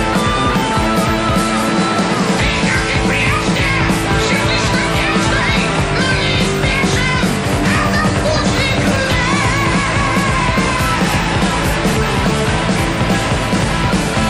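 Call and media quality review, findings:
Video or display buzz, 12.96 s to 14.30 s, through the end of the clip. Steady buzz at 75 Hz with a hash of harmonics above it, sitting roughly 20 dB under the signal. Probable component: a monitor or video cable near the audio path. Mechanism: the screen's 75 Hz field refresh couples into the audio wiring as interference.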